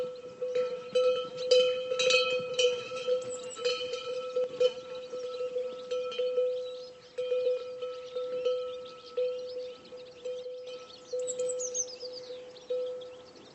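At 4.44 to 4.49 s and again from 10.43 to 10.67 s, the level drops abruptly by about 6 dB, likely from one channel dropping out before the mono sum. Unlike a plain gain dip, anything present only on that side vanishes entirely.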